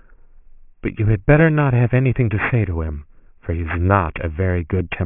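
Aliasing runs through the whole speech clip, consistent with resampling from 24 kHz to 6 kHz without an anti-alias filter. Sibilants fold back below 3 kHz as gritty, metallic tones roughly 15 dB under the speech, unlike plain band-limiting, which only dulls.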